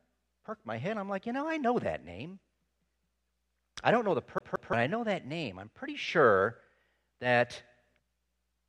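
At 4.38 s the speech catches in a CD stuck on one turn. A scratch sends the laser back a track, so the same 0.17 s slice plays twice, with a brief mute at each jump, until 4.73 s. The loop length stays fixed, which separates it from a network dropout's irregular gaps.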